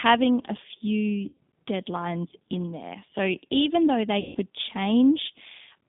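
Throughout, the speech carries plainly audible G.729 codec damage at 8 kbit/s. The codec rebuilds each 10 ms frame from a vocal tract filter, a pitch predictor and a few pulses, so the sound is rough and synthetic. This sets it apart from a simple telephone band-limit, which would only narrow the band, here to roughly 150 Hz to 3.6 kHz.

From 1.28 to 1.37 s, just before "deadlines in there", VoIP packet loss concealed by the speech codec covers about 90 ms, which fits three 30 ms packets. Later, from 4.20 to 4.37 s, just after "even though they", a second gap covers about 150 ms, which fits five such packets. In both, the decoder extends its last pitch and filter with falling gain, so each gap is filled with stretched, fading sound instead of the abrupt silence of a plain dropout. The sound stays weakened briefly after packets return.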